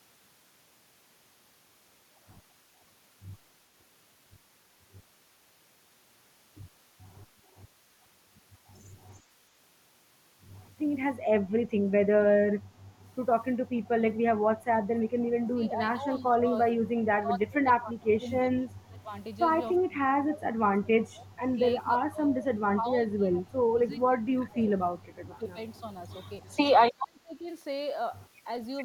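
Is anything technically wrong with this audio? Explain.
Yes. Speech suppressed in double talk occurs from 15.49 to 16.5, 16.85 to 18.27, 18.43 to 19.12, 19.82 to 20.63, 20.8 to 21.45, 21.99 to 24.7, 24.98 to 25.57 and 26.92 to 27.49 s. An echo canceller likely could not separate this side's talker from the loudspeaker echo of the other side and turned everything down. The speech dips by roughly 20 to 35 dB.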